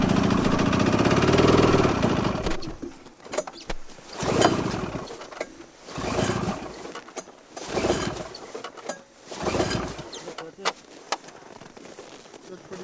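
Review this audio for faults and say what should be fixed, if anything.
Nothing stood out on listening to this audio, so there is nothing here to fix.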